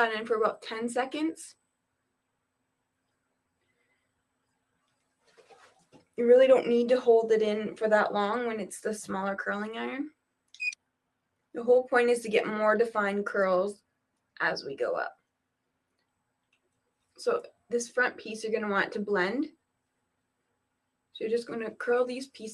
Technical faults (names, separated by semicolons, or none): sound cut by the noise suppressor